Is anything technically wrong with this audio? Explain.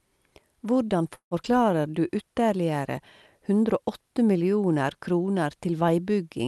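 Yes, there are three faults close together in this speech, heard through a call codec whose top end stops near 12 kHz.

A call audio freeze runs from 1.15 to 1.34 s. Packets were likely held up in transit, so the jitter buffer ran dry. The receiver stretched the last sound into a fading buzz or hiss, then about 90 ms of silence. The speech then resumes where it stopped, with nothing lost but about 0.16 s of delay added.

A skip ahead follows at 1.43 to 1.47 s. Roughly 70 ms of speech was discarded while later audio was already queued, so playback jumps forward. There is only a tiny 8 ms gap, and the two sides are joined almost directly, clipping a fragment of sound.

A jitter buffer slow-down then runs from 1.51 to 2.09 s. To rebuild its reserve, the receiver repeated single pitch periods over and over, adding 62 ms. The speech plays at 90% speed with unchanged pitch, sounding drawn out.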